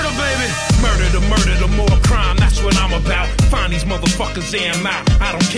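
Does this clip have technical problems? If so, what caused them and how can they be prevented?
No, there are no technical faults.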